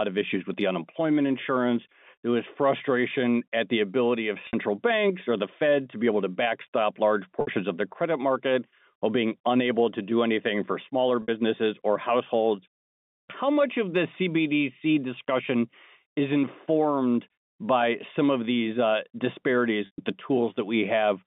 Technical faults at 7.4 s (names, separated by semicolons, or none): packet loss with pitch repetition